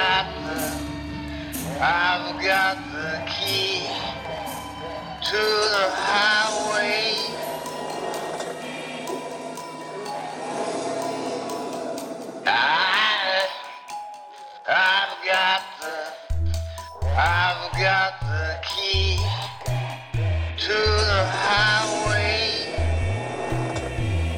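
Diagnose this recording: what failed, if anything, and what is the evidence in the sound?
Nothing failed: the sound carries no evidence of a fault at any stage.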